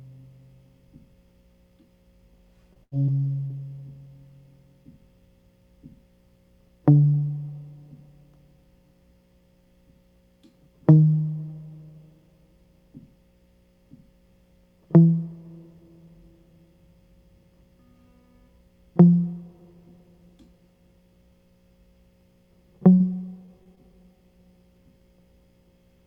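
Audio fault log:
2.73–2.78 s, 3.05–3.10 s, 3.48–3.52 s: short concealed packet loss. About 20 ms of music went missing each time. The receiver extended the preceding sound, leaving a brief smear or wobble.
2.84–2.93 s: burst of packet loss. About 80 ms was lost in a row. The receiver held and faded the last sound, then jumped ahead past the gap.
22.94–23.02 s: burst of packet loss. About 60 ms went missing. The receiver continued the previous sound as a dimming hold before resuming further on.
23.46–23.49 s, 23.63–23.67 s, 23.75–23.79 s: short concealed packet loss. Three more 20 ms dropouts were patched from the preceding sound, giving quick wobbles in the music.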